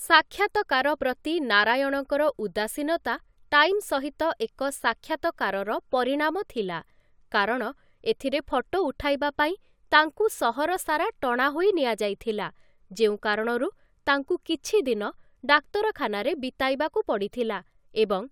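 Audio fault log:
No technical faults can be heard anywhere in the recording, and the signal stays steady and continuous throughout.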